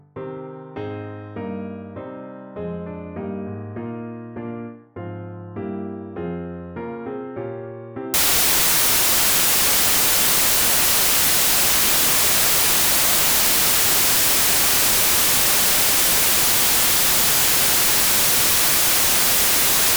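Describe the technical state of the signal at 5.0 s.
At 5.0 s the signal is intact, with no audible fault at that point.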